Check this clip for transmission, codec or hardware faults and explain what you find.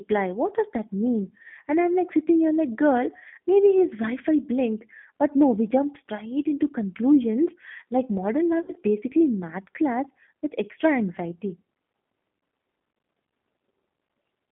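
Two faults are audible: G.729 codec coloring across the whole clip, and one burst of VoIP packet loss concealed by the speech codec.

Throughout, the speech sounds narrow, slightly rough and synthetic. This is the G.729 codec at 8 kbit/s, heard here on a line passing roughly 200 Hz to 3.5 kHz. The decoder rebuilds each 10 ms frame from a vocal tract filter, a pitch predictor and a few coded pulses rather than the original waveform. That approximation is plainly audible as the roughness, and the upper band is missing entirely.

From 8.62 to 8.73 s the speech smears into a stretched sound that sags in level, then stays weak or distorted just after. This is VoIP packet loss concealed by the speech codec. About 60 ms of audio went missing, which fits three 20 ms packets. The decoder covered the gap by repeating its last pitch and filter with falling gain. Because each frame builds on the previous one, recovery lags for tens of milliseconds or more once real packets resume.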